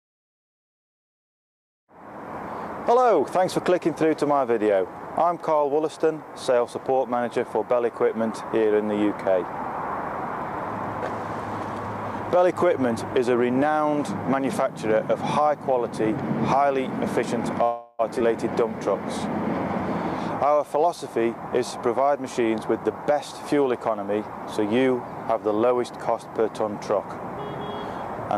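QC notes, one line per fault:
17.63–18.01 s, call audio freeze: the sound stops moving forward and the last moment is drawn out as a fading buzz or hiss for about 355 ms, with no silence reached. This points most likely to packets arriving late and the jitter buffer running dry, so the receiver filled the wait from the last audio it had. When playback resumes it continues from the same point, so nothing is lost, but everything after is pushed about 355 ms later.
18.19 s, skip ahead: playback jumps forward with only about 10 ms of fill, and roughly 200 ms of audio is gone, the two sides butted almost directly together. A stretch was dropped while later audio was already queued, either lost in transit or discarded by an overflowing jitter buffer, and this removes much of the delay built up by the freeze just before, pulling timing back by roughly 150 ms.
20.46–23.11 s, jitter buffer speed-up: the audio runs at about 106% speed with pitch unchanged, enough to sound hurried. 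The buffer was holding more audio than its target, so the receiver trimmed short pieces of one or a few pitch periods, one after another, to shrink the delay. Roughly 150 ms is taken out over these 2.65 s, which is what makes the passage feel pressed forward.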